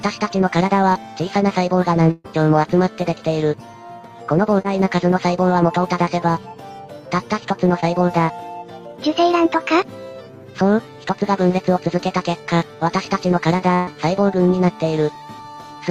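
At 0.93 to 0.97 s there is a short concealed packet loss. About 20 ms of audio never arrived in time, and the receiver bridged it by extending the preceding sound for roughly 14 ms before blending back. It is heard as a brief smear or wobble. On a spectrogram the harmonics or noise run on unchanged for that sliver before blending back into the real audio.

From 2.11 to 2.26 s comes a burst of packet loss: about 140 ms went missing together. The receiver stretched the last sound for about 133 ms while fading it, ending in about 10 ms of silence, so a held, decaying buzz or hiss replaces real content and playback jumps ahead. A waveform shows a repetitive, shrinking stretch with a brief flat dropout before normal audio returns.

The same short concealment recurs at 4.62 to 4.66 s and 7.80 to 7.84 s, each about 20 ms lost.

A second burst of packet loss at 13.74 to 13.89 s drops about 120 ms, covered by roughly 128 ms of fading continuation with no silent gap, leaving a frozen, dimming spectral smear before the audio resumes.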